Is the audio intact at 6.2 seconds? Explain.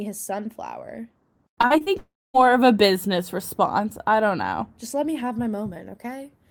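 Yes, the audio at 6.2 seconds is intact, with no audible fault at that moment.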